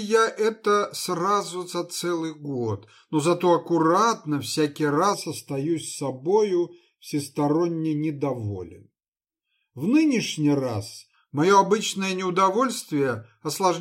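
From 5.14 to 11.14 s the audio turns hollow and phasey, which is channel delay (comb filtering). One channel lags the other by around 0.4 ms, and summing to mono cancels shared content at evenly spaced fixed notches, the first near 1.5 kHz.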